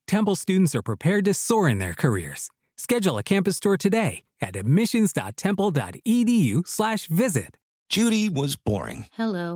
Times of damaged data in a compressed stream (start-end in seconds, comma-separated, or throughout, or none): none